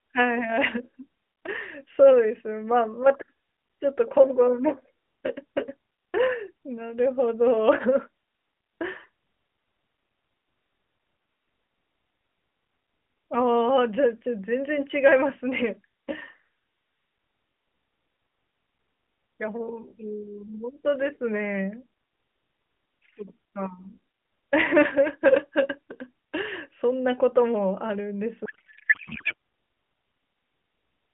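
From 28.46 to 29.34 s the speech turns into garbled noise and warble that barely tracks it: a codec payload misread. The AMR frames were packed octet-aligned but decoded as bandwidth-efficient, so every field landed in the wrong place. The sound is a narrowband AMR mobile line, which points to the 12.2 kbps mode, with light coding damage.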